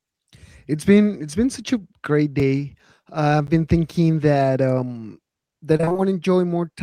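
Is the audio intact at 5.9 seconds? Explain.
No. Right after "been thinking that um", from 5.77 to 6.00 s, the audio suffers repeated packet loss (robotic sound). Six short dropouts, the longest 23 ms, are each patched by extending the preceding sound, so about half of that span is concealment rather than real signal. It sounds choppy, with pieces missing. A spectrogram shows harmonics flattening into repeated, static smears with abrupt seams, and the waveform shows copied cycles with sudden discontinuities.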